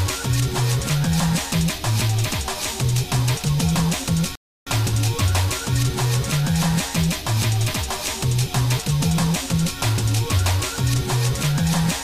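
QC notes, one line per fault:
4.35–4.67 s, rebuffering stall: the player exhausted its downloaded audio and paused until data arrived, so the sound drops to silence for 0.31 s, then resumes seamlessly.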